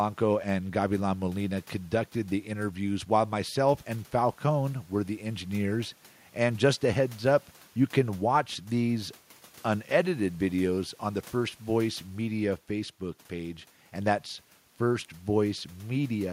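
No dropouts, clicks, distortion or level faults turn up anywhere in the recording.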